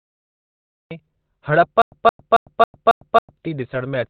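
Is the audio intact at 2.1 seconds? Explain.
No. From 1.82 to 3.37 s there is a stutter with silent gaps: a 0.17 s burst of speech replays six times, each followed by about 0.10 s of digital silence, every 0.27 s. This is likely a stalled player or stream re-sending its last fragment at each retry, so the speech that belonged there is lost. The identical burst returning at an even pace sets it apart from random dropouts.

Underneath, heavy Opus compression runs through the whole clip, including 2.1 s. Nothing remains above 4.5 kHz, and the sound is muffled and hoarse, pointing to the narrowband speech (SILK) mode at a rate around 12 kbps. It lacks the swirling spectral holes of MP3 damage.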